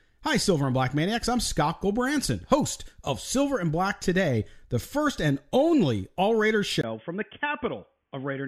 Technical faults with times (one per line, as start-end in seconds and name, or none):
6.81-8.48 input switched to a poorer device